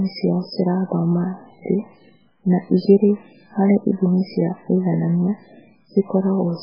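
Throughout the speech there is heavy MP3 compression damage: nothing survives above 5.3 kHz, so the top end sounds dull, and weak frequency lines flicker between frames, giving a watery, swirling texture with chirpy sibilants and smeared attacks. The likely cause is a very low bitrate, around 8 kbps.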